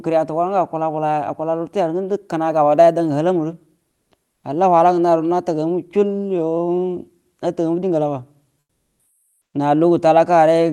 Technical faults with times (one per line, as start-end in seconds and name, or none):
3.89-4.11 comfort noise in place of the background
8.59-9.53 comfort noise in place of the background